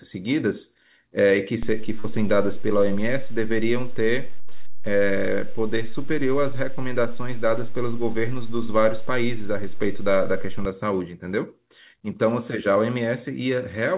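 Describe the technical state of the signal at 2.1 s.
At 2.1 s the signal carries a DC step. At 1.63 s the waveform's zero line jumped to a new offset, and it holds until 10.65 s. A shift like this comes from a converter recalibrating or an offset input being switched in. Its onset registers as a low thump, and its return at 10.65 s gives a second one. Between them the speech continues unchanged. At 2.1 s you are inside this shifted stretch.

Just before, from 2.00 to 2.06 s, there is short concealed packet loss. About 40 ms of audio never reached the decoder in time. The receiver covered the gap by extending the preceding sound, pitched if voiced and as shaped noise if not. It then crossfaded back into real audio. The result is a brief smear or wobble, and a short consonant there can disappear. The call codec's narrow band, with nothing above 4 kHz, fits G.711 at 64 kbps.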